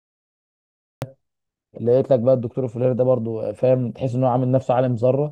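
A speech recording with a cut-off start: the first 1.02 s is digital silence, and at 1.02 s the audio jumps straight into the middle of an utterance with no natural attack or fade-in. Capture or streaming began late, so the signal is switched on abruptly mid-sound rather than building up from the start of the phrase. The opening of that utterance is missing.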